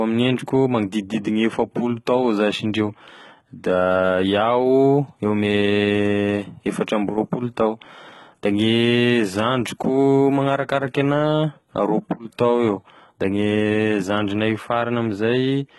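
From start to finish the speech carries heavy HE-AAC compression damage. The upper band sounds rebuilt rather than recorded: sibilants turn gritty and metallic, and nothing reaches above 11.8 kHz. That fits a likely low-bitrate stream near 16 kbps, with treble copied up from lower bands.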